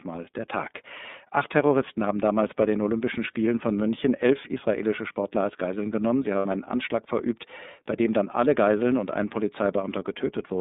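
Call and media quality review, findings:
iLBC codec, throughout: band limited to 200 Hz to 3.7 kHz, speech plainly rough and synthetic, 30 ms frame structure fitting the 13.33 kbps mode, each frame's excitation coded independently.

Lost iLBC frames, 6.39 to 6.46 s: a 60 ms gap, consistent with two 30 ms frames, concealed by repeating the last pitch cycle mixed with noise, giving a brief buzzy held vowel.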